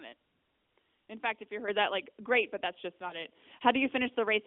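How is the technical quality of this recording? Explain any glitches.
It's a narrowband mobile call with light AMR narrowband codec colouring and a 250 Hz to 3.5 kHz line band, and there are two glitches worth pointing out.

At 1.68 s, right after "fact if you" and before "that like great but", the microphone volume steps up. The call software decided the mic was too quiet and bumped the input gain in one go, so voice and background both jump up by about 7 dB.

From 3.08 to 3.26 s, after "great but that's just", there's a lost AMR speech frame, a single 20 ms one. The decoder patched the gap by reusing the last good settings at lower gain, which gives a quick dip or warble before the sound settles again.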